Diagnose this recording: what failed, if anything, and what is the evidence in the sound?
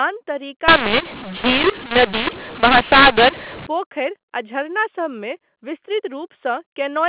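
From 0.68 s to 3.67 s the speech turns harsh and gritty, with levels jumping unevenly and pauses filling with hiss. This is a codec-stage mu-law and A-law mix-up: G.711 mu-law samples decoded as A-law, scrambling amplitudes and lifting near-silent samples.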